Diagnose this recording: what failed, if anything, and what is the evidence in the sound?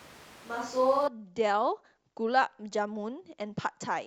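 Likely a switch to a distant microphone at capture: until 1.07 s speech is hollow and roomy; spectrogram shows thin lows, smeared tails, noise around 25 dB down.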